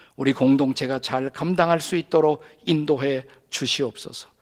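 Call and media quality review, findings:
No faults found in this speech clip. The full-band Opus voice compression is audible as light coding texture, consistent with hybrid mode around 20 kbps in 20 ms frames.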